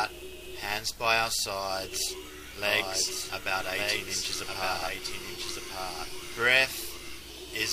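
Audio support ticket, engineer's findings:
Doubled audio track, 2.66 to 6.38 s. Likely a second capture path or misaligned edit mixing in a late copy. Full-band duplicate trails by about a second, a few dB quieter, no decay or room colour; starts and stops abruptly.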